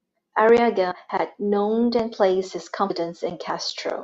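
At 0.90 s, just before "had known and placed", and at 2.89 s, right after "known and placed his", compressed frames are skipped: roughly a tenth of a second vanishes, which fits a few 24 ms frames. Unlike a dropout, there is no silent gap; the audio simply jumps ahead.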